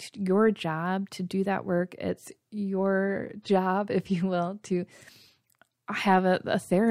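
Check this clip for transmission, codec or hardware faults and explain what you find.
No faults detected.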